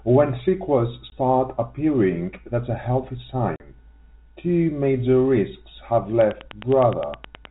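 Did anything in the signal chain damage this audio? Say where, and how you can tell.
Yes. The first damage is in the network stage, packet loss filled with silence. At 1.10 to 1.12 s, just before "appearing that's a healthy", the speech drops out for 20 ms, and at 3.56 to 3.60 s, right after that phrase, it drops out again for 40 ms. Both gaps are dead silent with hard edges. The lengths fit 20 ms packets, one lost and then two in a row, with the receiver playing silence instead of concealing them.

The second fault is a train of clicks from 6.21 to 7.46 s, starting after "major risks have". It is a regular ticking of about 9.7 clicks a second, around fifteen in all, each much the same shape and peaking about 5 dB above the speech. The clicks sit on top of the sound and do not cut it. That steady, mechanical pace points to a likely cause in the analogue wiring or interface stage, such as interference from nearby equipment or a faulty connection or power supply. 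All of this rides on G.711 telephone-band audio, which carries nothing above 4 kHz.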